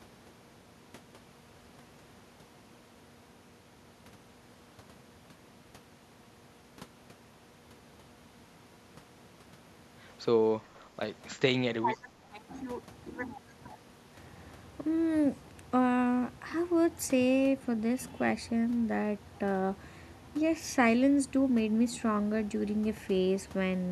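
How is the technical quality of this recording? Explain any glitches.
One glitch stands out, speech suppressed in double talk, from 11.75 to 12.14 s. With both sides likely talking at once, the echo canceller couldn't tell the talker from loudspeaker echo and pulled the level down. The speech dips by up to about 15 dB for roughly a third of a second.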